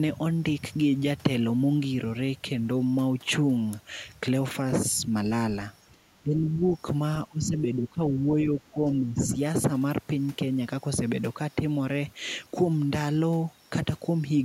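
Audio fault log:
5.92–6.63 s speech suppressed in double talk: the speech sinks by roughly 20 dB, likely an echo canceller ducking it as both sides overlap, unlike clean packet-loss gaps.
7.28–9.37 s speech suppressed in double talk: the speech drops by up to roughly 15 dB, totalling around 1.5 s, likely the canceller again ducking the speech during overlapping talk rather than slow gain pumping.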